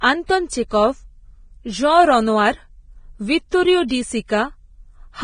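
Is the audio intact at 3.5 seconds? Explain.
No. From 3.49 to 3.52 s, a pre-echo puts a brief hiss, about 32 ms long, just ahead of a sharp speech onset, and the onset itself sounds softened. The codec spreads its quantisation noise across a whole transform block, so noise scaled for the loud attack also fills the quiet gap before it. Unlike a click or a dropout, it is a smear of noise that grows into the attack, not a discrete tick or silence.

Heavy compression damage runs through the whole clip, including this moment, and is likely Vorbis compression at a low bitrate. Nothing sounds above about 9.7 kHz, and the treble that remains is coarse, hissy and grainy, with tones roughened and consonant edges blurred. That sets it apart from a plain low-pass filter, which would dull the top cleanly, and from broadband background noise, which would not follow the speech's own spectral detail.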